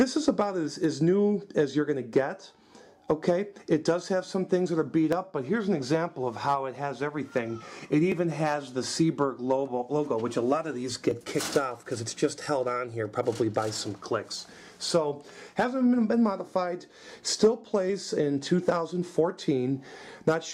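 The recording was likely made in 3-second chunks, losing a few milliseconds at each handover, so audio is missing between chunks and the sides butt together. This is heard as brief skips, a few milliseconds long, at 2.13, 5.13, 8.12, 11.11 and 14.11 s.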